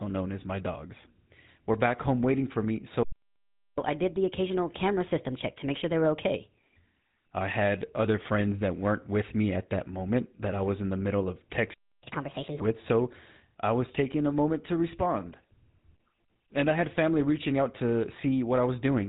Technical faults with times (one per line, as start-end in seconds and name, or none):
0.00-19.09 GSM full-rate codec
3.03-3.78 playback stall
3.78-6.76 catch-up at higher speed
12.03-12.61 catch-up at higher speed